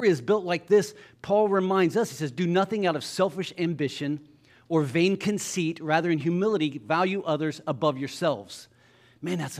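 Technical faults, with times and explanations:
Nothing in this bit of speech stands out as a technical problem; there's nothing here worth flagging.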